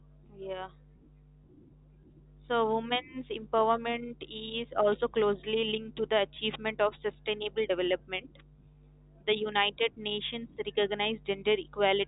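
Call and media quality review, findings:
Nothing to flag on this speech clip: it's ordinary G.711 mu-law telephone audio at 64 kbps, with the expected narrow band topping out around 3.8 kHz.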